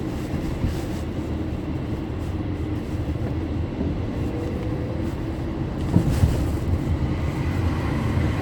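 A recording of sounds with no audible technical faults anywhere in the clip.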